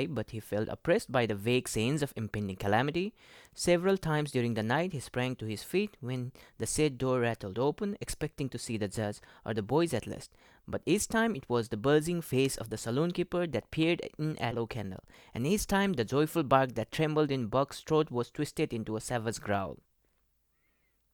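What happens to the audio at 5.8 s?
Nothing goes wrong at 5.8 s: the speech carries on intact through that moment, with no dropout, click, distortion or other audible fault.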